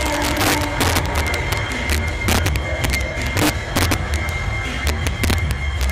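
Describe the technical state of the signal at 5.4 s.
At 5.4 s, as throughout the clip, the gain stage drives peaks about 6 dB past the integer limit and, instead of limiting them, wraps them to the opposite sign. This integer overflow turns a small share of samples into sharp cracks on loud peaks.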